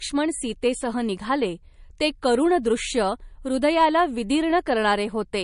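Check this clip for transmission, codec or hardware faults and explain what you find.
One codec fault runs through the whole clip: low-bitrate audio saved at a high bitrate. The speech was likely squeezed through a low-rate MP3 first and then re-encoded at a generous rate, which cannot restore what was discarded. Nothing survives above 10.6 kHz, so the sound is dull and lacks air, pointing to an original encode around 40 kbit/s.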